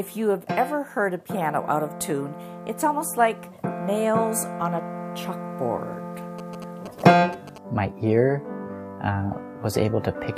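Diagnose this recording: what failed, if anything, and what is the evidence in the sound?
GSM signalling bursts appear from 6.39 to 7.58 s: a galloping dit-dit-dit of short buzzes pulsing at 217 Hz, sitting roughly 15 dB below the main sound. The failure is in the analogue wiring. A nearby 2G phone was sending brief radio bursts while signalling to its network, and a cable or input stage picked them up. The circuit rectified the RF envelope and turned the burst timing into audible interference.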